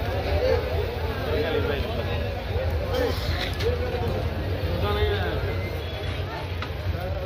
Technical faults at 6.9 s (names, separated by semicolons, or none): Bluetooth SBC bit pool drop